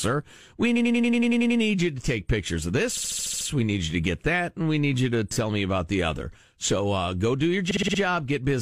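Repeated frames at 0.75–1.59 s (before "you to take pictures"), 2.96–3.47 s, 5.33–5.36 s (after "we need you to") and 7.70–7.99 s. Short runs of compressed frames were played repeatedly, so the speech stutters on looping blocks of about 93, 62, 9 and 48 ms. The clip runs longer by the repeated time.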